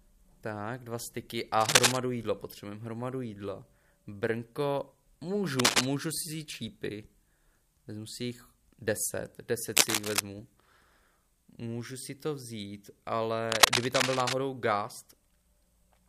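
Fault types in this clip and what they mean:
Cable scratch noise: four short stretches of dense, ragged scratching ride over the sound at 1.61 to 1.97 s, 5.59 to 5.86 s, 9.77 to 10.20 s and 13.49 to 14.35 s, the first about 10 dB above the signal and the rest about 5 dB. The likely cause is a worn cable or connector being moved. Unlike the isolated ticks of vinyl crackle, each burst is a clustered rustle.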